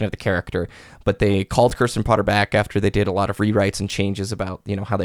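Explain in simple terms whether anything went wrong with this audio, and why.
Something did go wrong, twice. At 1.69 to 1.71 seconds, and again at 3.9 to 3.92 seconds just after "lot of rewrites and", the speech has chunks out of order. A tiny 10 ms piece of sound arrived one step late. It played after the piece that should have followed it. Nothing is missing, but the order is swapped. That leaves hard joins, so you hear a brief jumbled blip.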